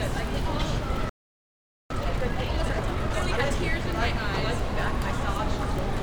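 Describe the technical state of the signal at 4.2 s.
At 4.2 s the signal is intact, with no dropout, distortion or other fault in the sound at that moment.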